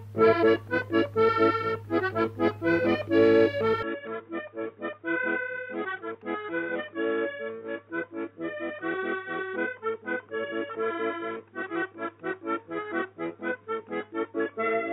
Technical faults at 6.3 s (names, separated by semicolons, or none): input switched to a poorer device